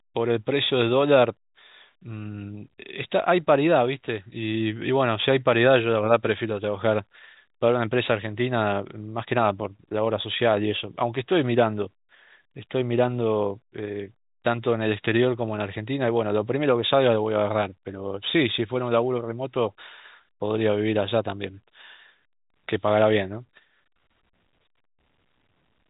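No technical faults can be heard in this speech: it carries the expected sound of G.711 A-law telephone coding, with nothing above about 3.8 kHz, and any coding noise is faint at most.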